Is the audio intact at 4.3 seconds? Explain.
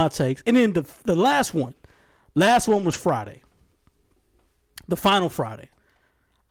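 Yes, the speech at 4.3 seconds is intact, with no dropout, click, distortion or other fault at that moment.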